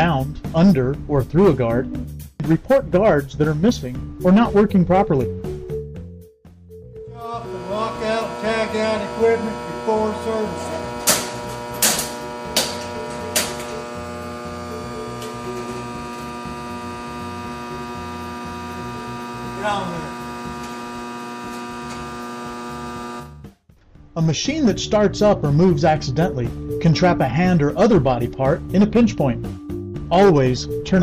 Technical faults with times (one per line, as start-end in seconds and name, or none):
none